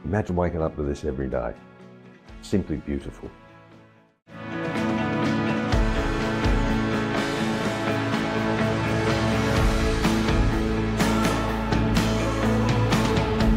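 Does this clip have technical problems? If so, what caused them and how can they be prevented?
No, no technical problems here.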